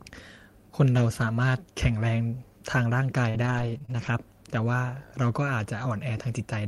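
From 3.29 to 4.08 s the speech turns choppy and robotic, with short pieces dropping out and smears bridging them. This is repeated packet loss: successive holes, the longest about 45 ms, were patched by stretching the preceding sound.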